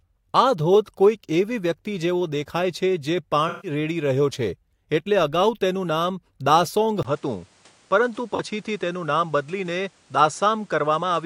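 From 3.48 to 3.71 s the sound turns smeared and noisy for about 150 ms. This is AAC frame loss with concealment: several consecutive frames, roughly seven going by the duration, never reached the decoder, and it rebuilt the gap from the last good spectrum with randomised phase. On a spectrogram the harmonic striations blur into a flat, grainy patch. On the waveform the envelope stays filled in rather than dropping to zero.

At 7.03 s there is a brief gap of about 20 ms. From there to the end the sound is duller. The likely cause is an input switched to a poorer device. The spectrogram shows a hard ceiling at 10.5 kHz with nothing above it, plus a new steady noise floor roughly 35 dB under the signal. The loudness stays about the same, so the waveform shows only the short dip at the switch.

From 8.35 to 8.40 s a second, shorter frame loss of about 43 ms appears as a small smeared smudge.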